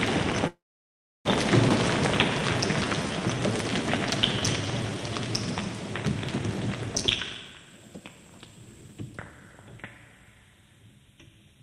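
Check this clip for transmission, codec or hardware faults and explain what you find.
Four network-related faults show up in the playback timing.

From 0.47 to 1.27 s there is a call audio freeze. The last sound carries on briefly, then about 0.69 s of silence follows before playback resumes. This likely comes from packets held up until the jitter buffer emptied. Nothing is lost, which sets it apart from a skip.

From 1.69 to 1.72 s the audio skips ahead. Roughly 0.4 s of sound is dropped, and the two sides are butted together with almost no gap, unlike the freeze's inserted pause.

From 1.98 to 5.33 s a jitter buffer slow-down plays the audio at 90% speed. Repeated pitch periods add 344 ms, stretching sounds without lowering pitch, unlike a tape-speed drop.

From 7.02 to 9.79 s a jitter buffer speed-up runs the audio at 127% speed. About 0.7 s of short pieces is removed to cut excess delay, so the audio sounds hurried while its pitch stays unchanged.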